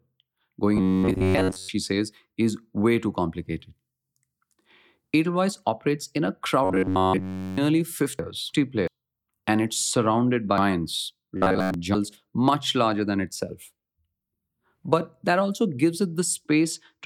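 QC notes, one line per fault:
0.77–1.69 s, 6.65–7.58 s and 11.37–11.74 s, robotic sound from repeated short buffers: a rigid, metallic buzz at about 94 Hz that still roughly follows the speech, ending before "says is way too" and starting after "operates in a". The likely cause is audio arriving too seldom, with the last short slice repeated in its place. A 94 Hz buzz fits a slice of about 10.7 ms. Most of the first and third passages and all of the second are repeats.
8.19–8.88 s and 10.58–11.95 s, chunks out of order: jumbled, garbled moments with hard joins, as 0.34 s sections of audio play in the wrong order. In the first passage a section plays after the one that should follow it. In the second, between "and it's surrounded" and "much larger than itself", a section turns up three sections late. Nothing is missing, but each misplacement leaves three abrupt joins. The second passage also overlaps the third buzzing stretch.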